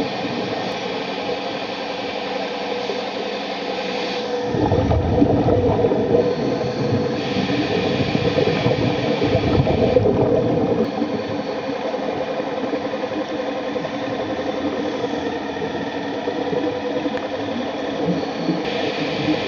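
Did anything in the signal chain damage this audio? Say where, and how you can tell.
Yes. The damage happened at the codec stage, as damaged data in a compressed stream. Three brief disturbances occur at 0.72 s, 10.85 s and 18.65 s. At each, some of the encoded bytes were corrupted, so the decoder misread the frame, lost sync and scanned for the next valid frame header. These are decoding glitches from corrupted frames, not a buffer underrun or a wiring or converter fault.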